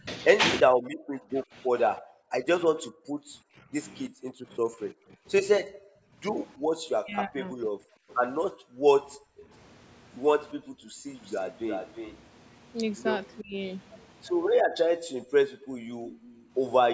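From 0 to 13.56 s, the speech dips and breaks up in pieces, about three seconds in all. The deepest drops reach around 40 dB. This is likely speech suppressed in double talk. The echo canceller could not tell the local talker from loudspeaker echo while both sides spoke, so it turned everything down.

Between 6.58 and 11.05 s, the room sound drops sharply, by about 40 dB at worst, for roughly a second in total. This is background gated by the echo canceller. It clamped the microphone while the loudspeaker played, then released.

From 8.1 to 12.18 s, a faint delayed copy of the speech trails the original by about 349 ms. It sits roughly 15 dB below the speech. This is likely an echo leak. One side's canceller let part of its loudspeaker pickup through, and that was sent back.

From 14.66 to 16.17 s, the background is gated again. It drops by up to about 40 dB for about a second overall. The canceller shut the microphone while far-end audio played.

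From 16.08 to 16.43 s, a second, weaker echo leak appears. It lags by about 358 ms and sits roughly 25 dB down, so only a brief, quiet trace of the speech returns. The call's microphone processing passes nothing above 8 kHz.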